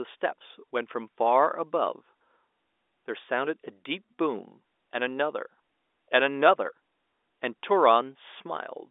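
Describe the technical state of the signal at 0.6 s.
At 0.6 s the signal is intact, with no fault present, only the narrow band of ordinary G.711 telephone coding that passes nothing above about 3.8 kHz.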